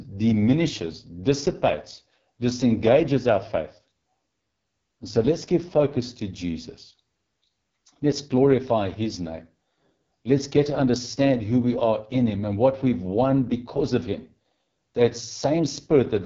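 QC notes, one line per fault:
Throughout: AMR wideband (HD Voice) codec damage, heavy. The speech has the rough, raspy texture of AMR-WB running near its lowest rate; the sound points to roughly 6.6 kbit/s. At that rate the pulse-driven vocal tract model gets too few bits to follow the waveform, so the excitation turns coarse. Content stops around 7.3 kHz, and the top band above 6.4 kHz is synthetic shaped noise rather than coded signal, adding a hissy sheen.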